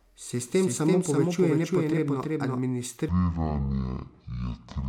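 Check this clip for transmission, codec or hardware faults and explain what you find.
Two faults can be heard in the speech: a doubled audio track at the start and a section at the wrong speed near the end.

From the opening to 2.6 s there is a doubled audio track. A second full-band copy, about as loud as the original, trails it by roughly 300 ms, likely from a slower second capture path. It sounds like a dry, roomless echo, and on a spectrogram every syllable appears twice, offset horizontally, until the copy cuts off abruptly.

From 3.09 s to the end there is a section at the wrong speed, playing at 0.517 times normal, likely because it was fitted to the wrong clock. Pitch drops by about ten semitones and the speech turns deep and dragging. On a spectrogram the harmonics compress downward and the syllables stretch to nearly twice their length.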